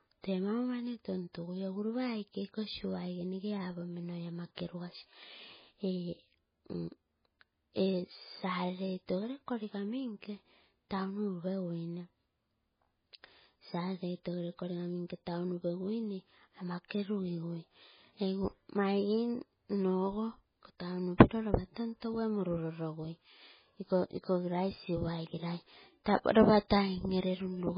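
From start to finish the speech carries heavy damage, likely from MP3 compression at a very low bitrate near 16 kbps. Nothing survives above 5 kHz, leaving a flat ceiling on a spectrogram, and sparse upper detail flickers between frames, sounding watery with smeared consonants.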